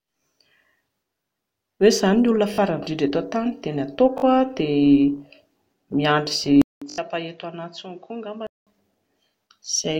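A speech clip in which new audio reached the output late three times, so the device replayed its last buffer. Each time a tiny piece of speech repeats with hard joins, heard as a brief buzzy stutter consistent with a 20 ms buffer. The first two, at 2.54 and 4.18 s, each sound the same fragment twice more. The one at 6.9 s repeats four extra times, losing roughly 70 ms of audio. From 6.62 s the input was likely switched to a poorer microphone or headset profile. After about 200 ms of silence the speech returns roughly 10 dB quieter, dull, with nothing above 7.6 kHz and a new noise floor well beneath it, then clears again at 8.67 s.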